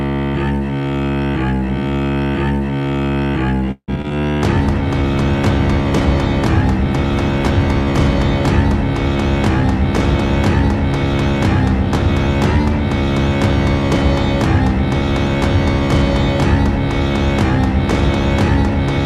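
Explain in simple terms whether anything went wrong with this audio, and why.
A few things went wrong, all close together. From 3.71 to 4.06 s there's repeated packet loss, which gives a robotic sound. Three chunks of audio went missing, the longest about 160 ms. The system papered over them by stretching the previous sound, so about half that stretch is filler and comes out choppy.

Right after, at 4.1 s, there's a skip ahead. Roughly 70 ms of audio was thrown away because newer audio was already queued. Playback just jumps forward, with the two sides stitched together almost seamlessly, so a tiny slice simply vanishes.

Then from 4.59 to 10.41 s there's a call bitrate drop. The connection seemed to get squeezed, so the encoder was told to save data and coded the sound much more crudely. It turns rough and dull for those seconds, and it's at its worst for about 3.5 s before picking back up.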